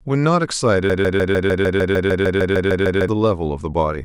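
From 0.90 to 3.08 s the speech locks into a broken-record loop: a 151 ms fragment repeats 14 times back to back, likely from a stalled player or stream resending its last buffer. On the waveform and spectrogram, identical blocks tile at exact intervals, and the missing speech never returns.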